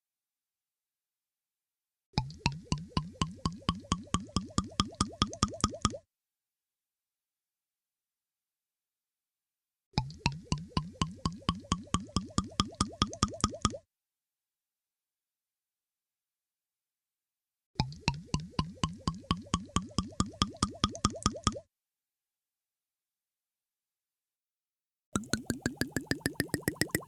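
A section at the wrong speed runs from 24.36 s to the end at 27.07 s, where the audio suddenly plays 1.58 times faster than the material before it. Because speed and pitch are tied together, everything in that stretch jumps up by roughly seven semitones and sounds hurried and thin. The likely cause is that this last portion was fitted to the wrong clock during editing or playback, so its samples were read out too quickly.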